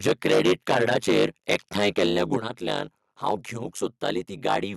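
Right from the start, and all the way through, there's overlap-add ripple: a fast, buzzy flutter riding on the speech at around 100 Hz, like a robotic tremolo. Whatever chopped the audio into windowed frames stitched them back with overlaps that don't add up to a steady gain, so the level dips once per frame, and the dips are very deep, about 60 dB.

Layered on that, from 0.06 to 2.36 s the speech is gritty and crackly, the harsh edge of microphone overload. The peaks sit about 13 dB past the converter's ceiling, and a fair chunk of the waveform gets its tops flattened. That most likely comes from the mic input gain being set too hot.

Inside that stretch, at 0.09 s, the level drops a touch, about 2 dB. Then at 2.37 s, right as the long overload ends, there's a clearer drop of about 6 dB. These sudden steps are the microphone volume being stepped down, likely the call software reacting to the clipping by pulling the device's input gain down in one go.

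Even after the gain is lowered, the loudest bits still clip in shorter bursts. The overload hits at 2.71 to 2.76 s and 3.28 to 3.31 s, both about 3 to 4 dB over. It comes back at 4.05 to 4.09 s, about 3 dB over, and again at 4.48 to 4.56 s, about 8 dB over. Each of those is a brief crunchy edge on a peak.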